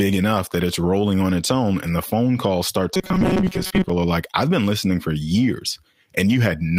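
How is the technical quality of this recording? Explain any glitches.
There's one real glitch here. From 2.94 to 3.90 s the speech goes robotic, which is likely repeated short buffers: audio arrived too slowly, so about half the time the last 5 ms or so got replayed, locking in a rigid, metallic 188 Hz buzz.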